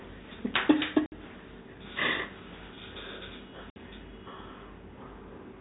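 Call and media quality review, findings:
Packet loss filled with silence at 1.06–1.12 s and 3.70–3.76 s: two 60 ms dropouts, fitting three lost 20 ms packets each, with the receiver playing silence. Waveform shows flat gaps with abrupt cuts. Spectrogram shows blank vertical bands, within the sub-4 kHz G.711 telephone band.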